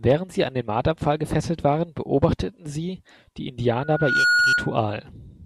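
A microphone was picking up the loudspeaker it fed, and around 1.4 kHz the loop gain rose above one, so this speech recording develops loudspeaker feedback squeal from 3.82 s to 4.77 s. The 1.4 kHz tone builds up over a little under half a second, growing on itself, then holds as a piercing whistle about 5 dB louder than the speech, riding over it until it stops at 4.77 s.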